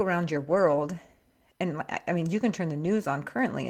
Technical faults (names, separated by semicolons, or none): lost packet rebuilt from error correction